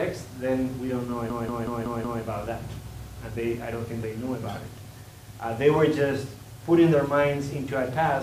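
From 1.3 s to 2.23 s, the audio breaks into a rapid machine-gun stutter: one fragment of about 186 ms repeats exactly, five times over, at roughly 5.4 per second, before normal playback resumes with essentially nothing missing. This is a system hang loop. The computer or driver stalled while the sound hardware kept replaying the same ring buffer, and the loop length fits an 8192-sample buffer.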